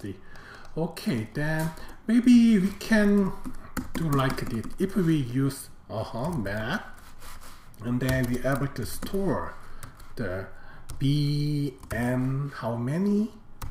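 No fault is audible anywhere in the clip.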